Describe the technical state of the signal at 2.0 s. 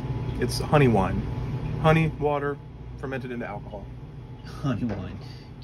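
At 2.0 s you're right inside a burst of zipper noise running from 1.95 to 2.30 s. The level is being pulled down by about 10 dB in 1 dB jumps, around forty a second, with no smoothing, so each step clicks and you get a quick ticking zip.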